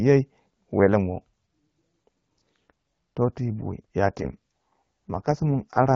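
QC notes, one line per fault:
4.06 s to the end, AMR rate drop: from 4.06 s the speech turns rough, raspy and more synthetic, yet the bandwidth holds and nothing drops out. The codec has stepped down from the clear HD Voice rate to its lowest mode, which fits a move from 12.65 to 6.6 kbit/s. It spends fewer bits modelling the voice and more on protecting the stream from a weak radio link, and here the rate never recovers.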